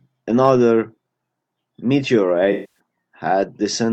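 From 0.44 to 0.51 s, hard clipping flattens the peaks by about 1 dB, giving a brief crackle on loud moments only, not the steady fuzz of heavier overload. At 2.52 to 2.79 s, AAC frame loss with concealment smears about 235 ms into a phasey, noisy patch rebuilt from earlier spectrum, unlike the clean silent gap of a plain dropout.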